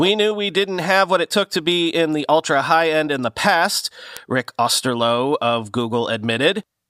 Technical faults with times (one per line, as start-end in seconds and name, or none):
0.49-6.62 word clock ticks